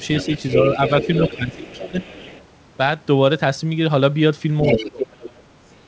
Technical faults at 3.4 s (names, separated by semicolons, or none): none